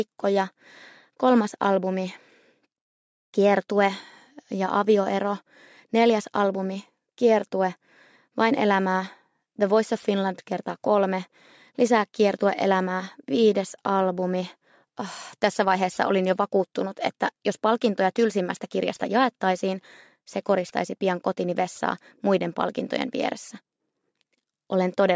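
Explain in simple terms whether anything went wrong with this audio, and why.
Aliasing throughout, 0 to 25 s: the sample rate was lowered without filtering first, so sound above 8 kHz folds back as wrong, gritty, metallic pitches.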